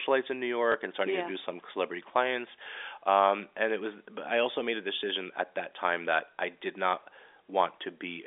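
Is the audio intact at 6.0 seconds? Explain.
Yes, the speech at 6.0 seconds is intact, with no fault at that moment.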